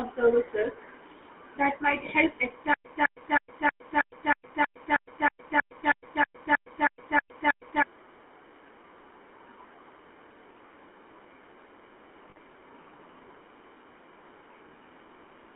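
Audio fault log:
throughout: GSM full-rate codec. The sound is confined to roughly 250 Hz to 3.5 kHz and carries a buzzy, gravelly roughness from pulse-driven vocal-tract modelling, consistent with 13 kbps GSM. Unlike brief dropouts, this coloration never lets up.
2.74 to 7.82 s: stutter with silent gaps. A 206 ms burst repeats 16 times, each followed by 111 ms of dead digital silence, a steady 318 ms cycle. This is likely a stalled stream replaying its last fragment. The exact repetition and true silence separate it from codec concealment.
4.48 to 4.51 s and 12.30 to 12.37 s: lost GSM frames. About 20 ms and then 60 ms of audio are replaced by a held, metallic ring, too short to be cut to silence. This happens because the decoder reuses the last good frame's settings.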